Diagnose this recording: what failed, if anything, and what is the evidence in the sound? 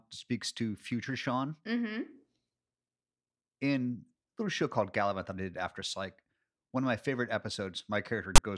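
A storage-stage fault: the player read the file's text metadata as if it were audio, so file tags played as audio. At 8.36 to 8.38 s, a loud rasp of about 24 ms bursts in with hard edges, pushed toward one side because ASCII bytes become lopsided sample values.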